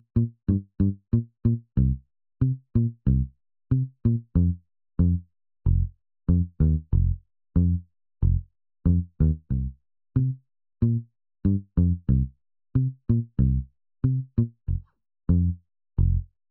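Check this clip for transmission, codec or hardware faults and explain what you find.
One fault runs through the whole clip: channel delay (comb filtering). One channel lags the other by roughly 0.7 ms, and summing them cancels shared content near 700 Hz and at regular intervals above it. The sound is hollow and phasey, and a spectrogram shows fixed horizontal notch bands.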